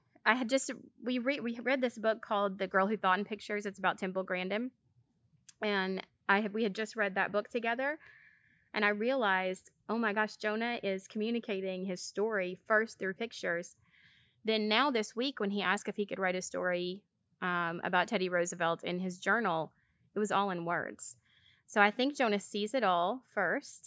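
No dropouts, distortion, timing errors or other playback faults are audible anywhere in this recording.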